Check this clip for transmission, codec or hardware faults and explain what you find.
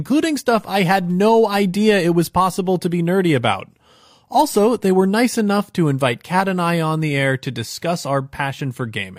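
No transmission, codec or hardware faults.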